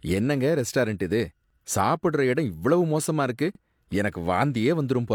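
A brief stutter interrupts the speech at 1.50 to 1.55 s and again at 3.55 to 3.60 s, each a small hiccup where roughly 48 ms of sound plays twice. These are overlapping chunks: the audio was handled in 2.0 s blocks, and each new block began about 48 ms before the previous one finished, so that slice repeats at every join, producing the evenly spaced double-take.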